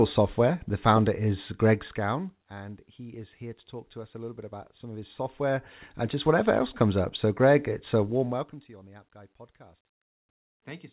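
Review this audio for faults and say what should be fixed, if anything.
Nothing in this speech recording stood out as needing a fix on listening.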